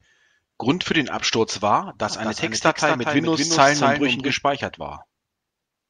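This is a speech clip with a doubled audio track running from 2.10 s to 4.34 s. During that stretch a second full-band copy of the speech trails the original by roughly a fifth of a second, sitting around 5 dB quieter. It has none of the decay or room colour a real echo would carry, and it cuts in and out abruptly at both ends. That pattern most likely comes from the same signal being picked up twice, once through a slower path, or from an edit leaving two copies out of step.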